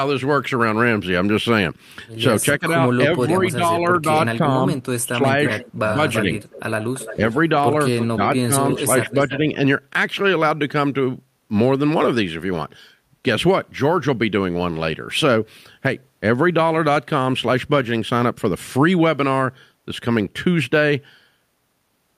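From 2.58 to 6.36 s the speech dips repeatedly by around 10 dB, in pieces adding up to roughly one and a half seconds. This is speech suppressed in double talk, likely an echo canceller that could not separate the talker from the far side and attenuated both. Shorter dips follow at 7.14 to 7.21 s and 8.15 to 9.45 s. Overlapping these, an echo leak brings back a delayed copy of the voice 339 ms late, about 10 dB below the speech from 5.46 to 7.36 s and at 7.99 to 8.06 s, then about 15 dB down from 8.68 to 9.38 s. The likely cause is residual loudspeaker pickup the canceller failed to remove.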